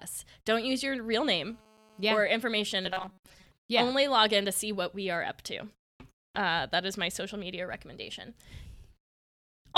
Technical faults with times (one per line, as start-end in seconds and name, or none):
1.22-2.21 GSM phone buzz
2.81-3.47 robotic sound from repeated short buffers